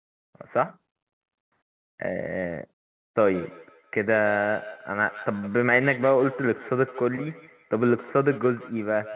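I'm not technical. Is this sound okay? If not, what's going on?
No. From 3.31 s to the end there's feedback echo between two devices: each phrase returns as a thinner, ringing copy about every 150 milliseconds, distinct repeats rather than a smooth room echo.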